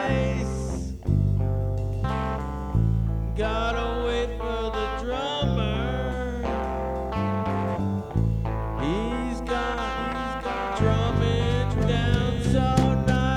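From 9.98 to 12.80 s, a dry copy of the sound trails about a second behind, somewhat quieter, then cuts off abruptly: a doubled audio track, likely from a second, slower capture path.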